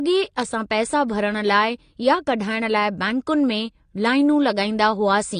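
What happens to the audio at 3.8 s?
At 3.8 s the speech sits under the same AAC compression damage that runs through the whole clip, so nothing new starts there. It sounds dull and smeared, with a warbly, fizzy edge on sibilants, and there's nothing above about 9.7 kHz. That's likely an AAC-LC encode at a low bitrate, something like 32 kbps. The encoder spends too few bits on the spectrum, drops the top end and leaves gaps the ear hears as swirl.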